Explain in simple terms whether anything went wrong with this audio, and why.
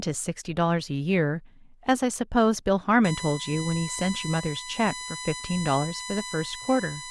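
From about 3.04 s until the end, a steady, high-pitched whine sits fairly loudly under the speech. This is USB whine. A USB connection draws power in bursts every thousandth of a second, and that pulsing leaks into the audio as a tone at 1 kHz and its multiples, here strongest at 4 kHz. Unlike mains hum, which is a low buzz, this is a thin, high, fixed-pitch tone.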